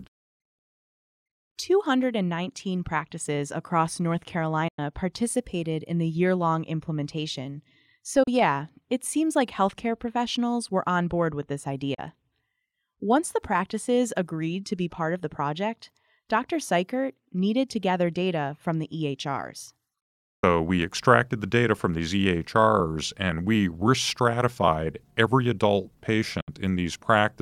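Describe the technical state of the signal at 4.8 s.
At 4.8 s the signal is just recovering from a digital broadcast dropout spanning 4.68 to 4.79 s. The receiver stopped getting usable frames, most likely because they failed their checksum or the signal was lost, so it muted output rather than play corrupt data. The speech fades to silence over about 8 ms and stays silent for roughly 96 ms, which fits about three lost frames, before resuming. Nothing transmitted during the gap is recoverable.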